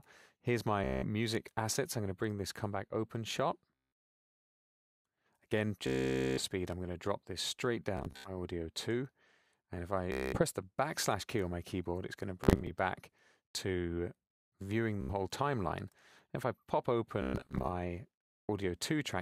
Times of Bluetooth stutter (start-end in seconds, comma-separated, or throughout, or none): 0.84-1.06, 3.75-3.92, 5.87-6.43, 7.97-8.30, 10.12-10.42, 12.44-12.71, 15.01-15.13, 17.22-17.69